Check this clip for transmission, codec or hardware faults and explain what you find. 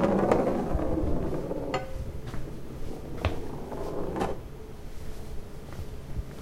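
Nothing stood out on listening to this sound.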